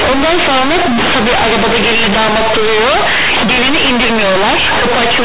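Speech with companded audio read as linear throughout: A-law bytes play as plain 8-bit samples without expansion, so each sign change swings across about half the output range. Unlike clipping, pauses fill with strong noise and quiet sounds become as loud and buzzy as loud ones.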